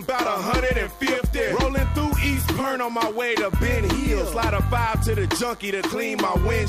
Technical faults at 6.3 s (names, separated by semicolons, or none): DECT cordless phone buzz